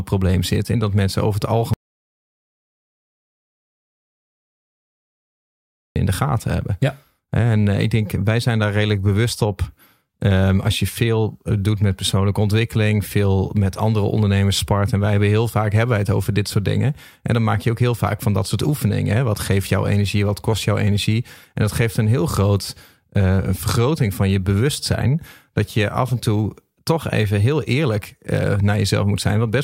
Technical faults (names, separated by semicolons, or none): audio dropout to silence